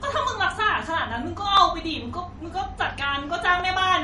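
Low-bitrate audio saved at a high bitrate runs throughout this speech. Nothing is present above 11.1 kHz, and the top end carries the smeared, swirly texture of heavy MP3 coding. The likely cause is a low-bitrate MP3, around 48 kbit/s judging by that cut-off, that was re-encoded at a much higher rate. The second pass only preserved the first encoding's losses and restored none of the removed detail.

Overlapping chunks cause brief stutters at 0.56, 1.57, 2.59 and 3.60 s, one every 1.0 s. At each join the next chunk begins about 13 ms before the previous one ended, so that sliver of audio plays twice. Each repeat is heard as a click or hiccup, and the steady one-second spacing points to the audio having been processed in fixed one-second blocks.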